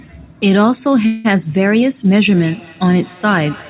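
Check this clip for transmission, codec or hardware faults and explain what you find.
Two faults are present in this speech clip.

From 1.06 to 1.26 s there is a call audio freeze. The sound is stretched into a fading buzz rather than dropping out, and the speech then resumes exactly where it stopped. The likely cause is delayed packets draining the jitter buffer. Unlike packet loss, nothing is skipped.

From 2.35 s to the end there is feedback echo between two devices. Each sound returns at a fixed interval of roughly a fifth of a second, growing thinner and more ringing, with the loudest repeat about 23 dB below the speech. Another device's speaker is feeding this microphone. The regular repeat interval sets it apart from ordinary room reverberation.

The band stops at 4 kHz, consistent with a G.711 mu-law call path.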